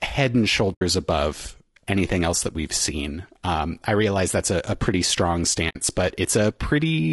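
Across the whole recording the speech sounds rough and grainy, with a hiss filling the gaps between the harmonics and a top band that seems thinned and synthetic. The damage is plainly audible. This is likely low-delay AAC compression, the AAC-ELD style used in video calls. Its short frames cannot separate the pitch harmonics cleanly, so at a low bitrate, one that fits something around 32 kbps, the coarse quantisation smears noise across them.

From 0.73 to 0.82 s, between "head and" and "above anything else that", the sound fades out and back in around a short gap of about 80 ms. The hole has soft edges. A second, slightly shorter gap of about 60 ms, from 5.69 to 5.76 s, follows "a a pretty strong". Both are AAC frame loss with muting. The decoder zeroed the missing spectra, and a gap of that length fits several lost frames. The overlapping windows then tapered the sound on either side of each gap, which is why the edges fade rather than cut.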